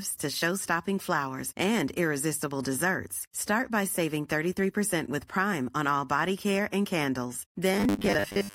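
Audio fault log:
7.74–8.54 s, robotic sound from repeated short buffers: a rigid 100 Hz metallic buzz, likely from 10 ms chunks replayed; spectrogram shows flat 100 Hz harmonic stripes, waveform identical repeating cycles.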